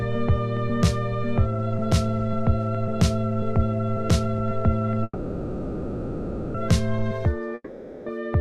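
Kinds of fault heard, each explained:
Call audio freeze: from 5.03 to 6.56 s the last sound stretches into a fading buzz, likely because delayed packets emptied the jitter buffer. A spectrogram shows smeared horizontal streaks thinning out. The audio then resumes intact, about 1.5 s later than before.
Long network dropout: from 7.54 to 8.08 s the sound decays into a fading buzz and then about 30 ms of near-silence, likely because packets were lost. The waveform shrinks to a flat line, and the audio resumes with about 0.52 s skipped rather than delayed.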